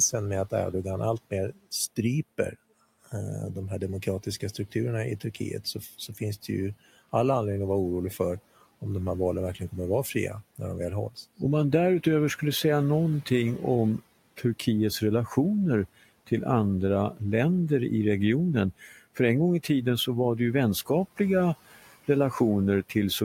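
Just after "andra länder i regionen", from 18.8 to 18.99 s, the speech turns faint and swallowed, dipping by about 9 dB for roughly a fifth of a second. This is speech cut by the noise suppressor, which mistook that quiet stretch for the room noise sitting about 24 dB below the speech.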